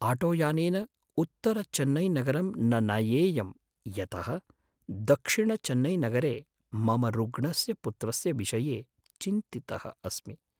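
No technical faults are audible anywhere in the speech.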